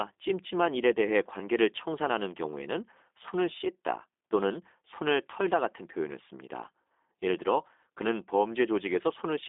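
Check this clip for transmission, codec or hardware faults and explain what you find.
One codec fault runs through the entire clip. The speech was carried by a G.729 codec, which resynthesises each 10 ms frame from a vocal-tract filter, a pitch predictor and a few pulses, consistent with an 8 kbit/s stream. Nothing reaches above 3.7 kHz, the band runs from 250 Hz to 3.6 kHz, and the speech sounds plainly rough and synthetic.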